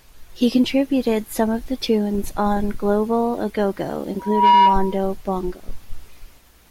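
From 4.19 to 5.03 s, a loudspeaker feedback squeal: the mic-to-speaker loop exceeds unity gain at 962 Hz, swelling within a fraction of a second to roughly 10 dB above the speech.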